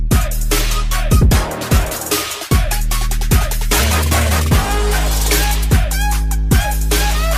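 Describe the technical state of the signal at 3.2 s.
At 3.2 s the signal is intact, with no audible fault at that point.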